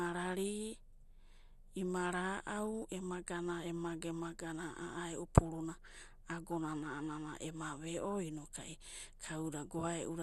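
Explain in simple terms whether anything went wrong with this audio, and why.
Something did go wrong, and it runs through the whole recording. The speech sounds dull and gurgly, with a grainy edge, and nothing comes through above about 12.2 kHz. That's the sound of MP2 compression, likely squeezed too hard. The codec splits the sound into narrow bands and shares out a limited budget; short of room, it shuts off the top bands entirely and roughly rounds the rest, hence the muffled, watery texture.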